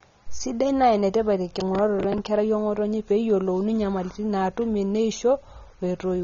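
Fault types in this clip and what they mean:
AAC compression: The whole clip has a dull, smeared quality with nothing above 6.9 kHz, and a watery, fizzy texture on sibilants and sustained vowels. The codec damage is plainly audible, which points to a low-bitrate perceptual coder, likely AAC-LC at around 24 kbps. At that rate the encoder lowers its bandwidth cut-off and quantises the remaining spectral lines coarsely, leaving gaps and smeared energy across the speech.
processor overload crackle: From 1.60 to 2.18 s a gritty, tearing crackle rides on the speech and then stops. The processing could not complete its short audio buffers in time and missed several deadlines in succession. Each miss replayed a fragment of stale audio with abrupt edges. The misses fit buffers of roughly 10 ms, with around seven missed in that stretch, so the overload was brief.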